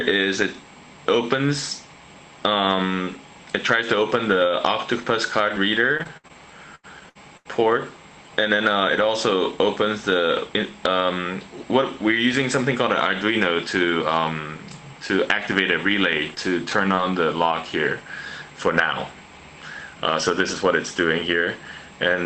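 Audio passed through a call link that sounds like Opus, with the top end stopping around 8 kHz and a texture that fits roughly 24 kbps, and it takes a few network hits along the way. The big one is repeated packet loss (robotic sound) from 5.49 to 7.47 s. Seven separate holes open up there, adding up to about 340 ms of missing audio, and the longest runs 83 ms. Each time the receiver keeps the last bit of sound going to cover the hole, and that patching fills about 17% of the stretch, so the passage comes out choppy, with chunks missing. Later there are two bits of short concealed packet loss. The first falls somewhere between 16.35 and 16.50 s, where a 20 ms slice never made it and got papered over by stretching the sound just before it, nudging timing by roughly 10 ms. The second, another 20 ms, lands at 16.95 to 16.99 s. Both come across as a quick smear or little wobble rather than a dropout. 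Around them you've got lost packets rebuilt from error correction at 16.71 to 16.73 s, 16.97 to 16.99 s and 17.51 to 17.53 s, each 20 ms long. There the next packet carried a low-bitrate backup copy, so nothing drops out, but those moments sound rougher and noisier than the audio on either side.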